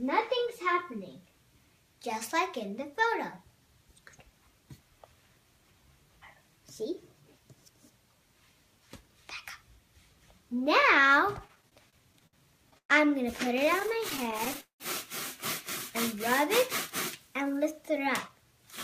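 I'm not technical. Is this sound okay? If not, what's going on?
No. From 11.39 to 12.35 s the sound goes through repeated stalls (stutter). The data carrying it kept arriving late, so the receiver's small holding store ran dry nine times. Each time, the last bit of sound was stretched to fill the wait, about 175 ms in all, with the longest wait 62 ms. Nothing is lost, but the audio drags and catches. It happens again from 13.59 to 14.82 s, this time with 14 stalls filling about 307 ms, the longest 192 ms.

Between them, from 12.78 to 12.91 s, comes a call audio freeze, most likely from data held up on its way so the store emptied completely. The receiver filled 115 ms, and 80 ms of that is silence, before the sound picked up from where it stopped. Nothing is missing. A pause has simply been pushed in.

Near the end, from 17.90 to 18.67 s, there is a jitter buffer speed-up. The receiver had more sound stored than it wanted, so it trimmed many tiny slices, roughly 70 ms in total, to catch up. 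The audio plays at about 107% speed without any change in pitch, which is fast enough to sound hurried.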